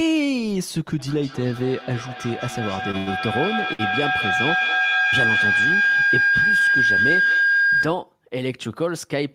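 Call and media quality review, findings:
Feedback howl, 0.99–8.06 s: tone around 1.5 kHz, loop delay roughly 200 ms, peaking about 4 dB above speech. Acoustic loop between two co-located endpoints; each pass gains level, narrowing to the loop's favoured frequency, sustained until loop broken.

Short stall from a late packet, three events: 2.91 s (20 ms held), 2.97–3.09 s (94 ms held), 3.73–3.81 s (62 ms held). Receiver jitter buffer ran dry awaiting late packets; last sound stretched, then resumed at same point. Nothing lost, but playout delay grows with each stall, likely network jitter upstream.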